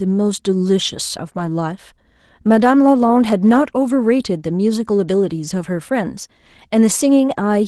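Around 1.45 to 1.51 s there's a lost packet rebuilt from error correction, probably two packets: no gap, but those 40 ms turn rougher and noisier through the 12 kHz Opus call path.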